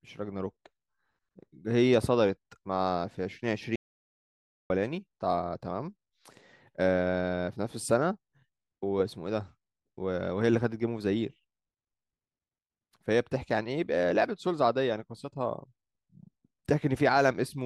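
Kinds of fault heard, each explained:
Audio dropout to silence: the speech cuts off for about 0.94 s, 3.76 to 4.70 s, likely a lost input link, showing as a flat silent waveform and blank spectrogram.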